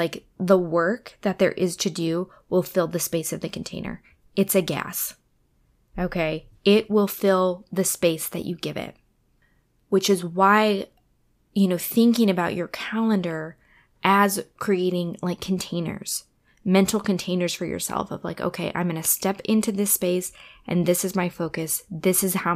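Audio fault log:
No audible faults detected.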